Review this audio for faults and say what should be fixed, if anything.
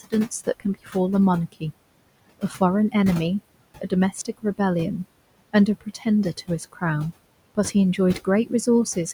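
Noise suppressor artifacts run through the whole recording. The suppressor pulls down, frame by frame, every band it judges to be steady background, by about 21 dB. The room noise, about 18 dB below the speech, drops away between phrases and comes back up underneath them. Unlike plain room noise, this residue pumps in step with the speech instead of holding a constant level.

Speech cut by the noise suppressor occurs six times: 0.6–0.95 s (deepest drop about 14 dB), 2.4–2.61 s (about 19 dB), 3.78–4.59 s (about 19 dB), 5.53–6.06 s (about 15 dB), 6.37–6.82 s (about 13 dB) and 7.55–8.67 s (about 16 dB). In each window, brief pieces of speech adding up to about 0.1 to 0.15 s are treated as noise and sink with the background, so consonants or word endings sound swallowed. This differs from a dropout because the sound fades rather than breaking off abruptly.

To prevent both, use a gentler suppression setting, and tune its noise estimate so it stops classing soft speech as background.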